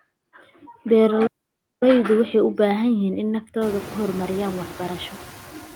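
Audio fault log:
Throughout, noise suppressor artifacts: the background is being pulled down by about 11 dB frame by frame, so it dips between phrases and swells back under the speech. The room noise that comes up by about 25 dB around 3.5 s, sitting about 18 dB below the speech, is real room sound rather than a fault, but it gives the suppressor more to chew on there.
1.27–1.82 s, playback stall: the audio cuts out cold for about 550 ms in the middle of the flow, then picks up again. A gap like that with no fade points to the player starving for data or its thread getting held up, which is the likely cause here.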